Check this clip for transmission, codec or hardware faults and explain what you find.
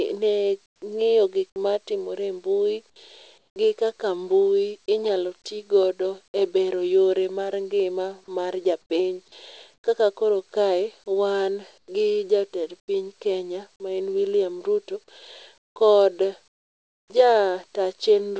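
Two kinds of fault are audible, both tied to the call's silence handling. The path itself runs through a wideband codec that leaves nothing above 8 kHz, which fits G.722 at 64 kbps.

Comfort noise in place of the background appears at 0.66–0.82, 3.38–3.56, 8.82–9.84, 11.78–12.88 and 15.58–17.10 s. In these pauses the real room tone gives way to a flat, featureless hiss. The likely cause is discontinuous transmission. The sender goes quiet when it detects no speech, and the receiver synthesises a rough match. The first two patches sit about 17 dB and about 8 dB below the surrounding background, so the floor audibly drops.

An onset clipped by the voice detector shows at 0.79–0.82 s and at 11.86–11.88 s. Speech resumes with a hard edge and no soft attack. About 30 ms is lost the first time and about 20 ms the second. The likely cause is a detector that reacts slowly to returning sound. Those first moments were never sent. 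Comfort noise filled the gap, and the sound then starts abruptly from it.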